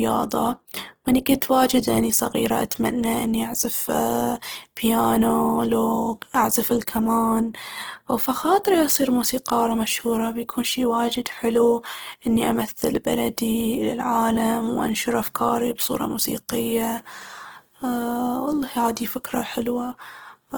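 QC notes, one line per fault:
Throughout: Opus compression, likely CELT mode near 16 kbps; speech turns plainly grainy and rough as starved bands are noise-filled, yet extends to 20.2 kHz.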